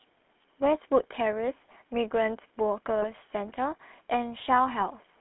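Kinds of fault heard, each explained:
GSM full-rate codec: The speech passed through the original GSM speech coder, which models the vocal tract as a filter and excites it with a coarse pulse train built from only every third sample, consistent with a 13 kbps full-rate stream. The line passes only about 250 Hz to 3.5 kHz, so the sound is thin and band-limited throughout, and the crude excitation gives it a plainly audible buzzy, gravelly grain.
GSM bit errors: Corrupted bits from a poor radio link reached the decoder and scrambled the filter, pitch or gain values it uses to rebuild each frame. When those parameters go wrong the spectrum warps or the level surges for that frame. Brief squawking, gargling breaks interrupt the speech from about 2.98 to 3.05 s, spanning several frames, and again, shorter, from about 4.80 to 4.83 s.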